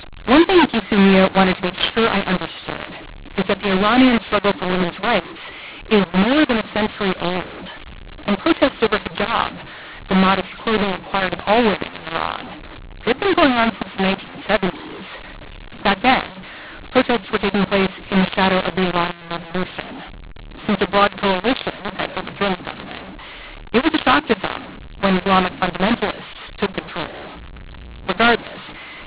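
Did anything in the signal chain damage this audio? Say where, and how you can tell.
Yes, at the codec: mu-law and A-law mixed up throughout, as mu-law samples decoded as A-law. The waveform shows scrambled levels and raised noise in pauses, and the spectrogram shows harsh distortion beneath the 4 kHz G.711 ceiling.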